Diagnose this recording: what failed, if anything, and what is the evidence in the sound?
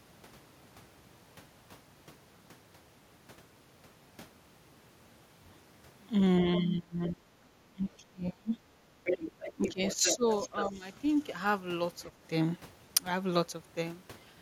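This is call processing, and the speech suppressed in double talk is most likely the echo canceller ducking both sides at once. The talker drops by about 30 dB at 6.6–7.49 s and 7.69–8.57 s, briefly at 8.9 s, then shallower dips around 9.56–10.25 s and 10.48–10.83 s.

The same stage lets the other side's voice leak through from 9.05 to 10.72 s, sitting only about 5 dB below the talker. The canceller's echo estimate likely fell behind during the overlap, so the loudspeaker pickup came through the microphone instead of being subtracted.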